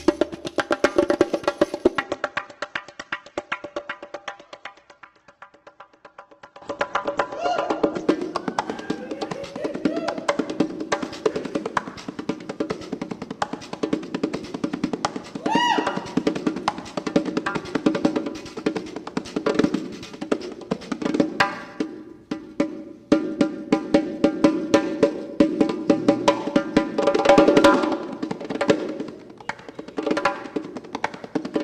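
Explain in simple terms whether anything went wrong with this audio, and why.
From 2.02 s to 8.02 s the sound suddenly turns dull, with the crisp top end gone: nothing above about 8.4 kHz survives. At 8.02 s it snaps back to the better quality, with no gap at either change. This is an adaptive stream at a lower bitrate. When the connection slowed, the player switched to a much smaller, more heavily compressed version for six seconds, throwing away treble and detail, then returned to the better version.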